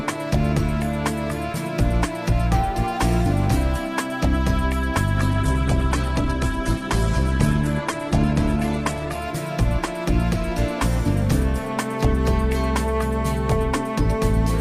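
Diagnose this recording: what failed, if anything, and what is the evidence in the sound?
Adaptive stream at a lower bitrate, 5.17 to 9.17 s: a network slowdown forced an abrupt, gapless switch that cuts everything above 12.2 kHz, consistent with Opus near 12 kbit/s.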